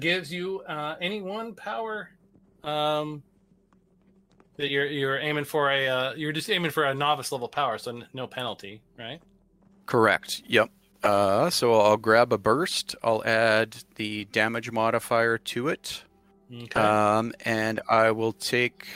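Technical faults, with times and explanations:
4.65–4.71 s and 7.53–7.56 s, corrupt frame decoded: damaged bits in the compressed stream got played anyway, so misread gains and codes throw energy into the wrong frequencies. The first hits a couple of frames, peaking around -20 dBFS; the second, a single frame, is fainter, near -35 dBFS.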